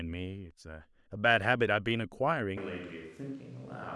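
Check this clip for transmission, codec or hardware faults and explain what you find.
One fault is present, a switch to a distant microphone. From 2.58 s to the end, the speech turns roomy and hollow. Bass thins out. Level falls by roughly 5 dB. Room noise rises to about 25 dB below the speech. The close microphone likely dropped out, leaving a farther one.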